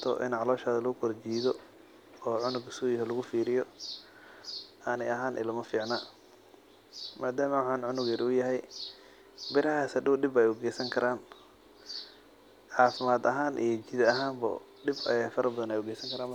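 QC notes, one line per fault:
No faults found on this speech clip.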